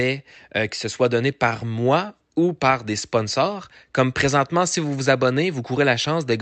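Nothing stood out on a careful listen to this speech recording at any point along its course.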